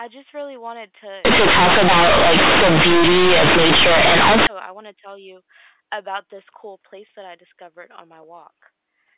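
This is a speech clip carried over A-law G.711 telephone coding, limited to 4 kHz. From 1.25 s to 4.47 s, after "just really wanted", the sound turns into very loud, harsh buzz with heavy noise in the pauses. It clears before "I want to tell". This is companded audio read as linear. The A-law bytes were played as plain linear 8-bit samples without expansion. Every sign change jumps across half the range, so quiet parts blare as loudly as loud ones.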